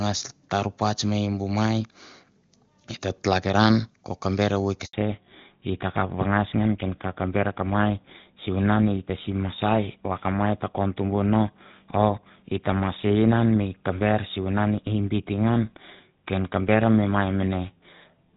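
A speech call suffers a handover gap at 4.85 s: while the phone switched networks, no speech frames arrived for 80 ms, so the sound decays within a few tens of milliseconds and stays silent until 4.93 s, when the new link begins carrying audio and whatever was said in that window is lost. Before the gap the call runs on the AMR wideband (HD Voice) codec, and the opening seconds sound clear, with little or no coding damage, consistent with a high rate around 23.85 kbit/s. From 4.93 s to the end the new link shows a fallback to narrowband: the call landed on an older narrowband codec, whose sound is consistent with GSM full rate at 13 kbit/s, and the band above 4 kHz disappears completely. Everything after that point therefore loses its top-end detail and sounds duller and rougher than the wideband opening.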